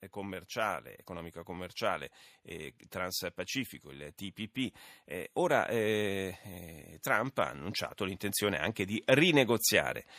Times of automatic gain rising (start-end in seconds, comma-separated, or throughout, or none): 0.14-2.16, 3.92-6.43, 7.06-9.57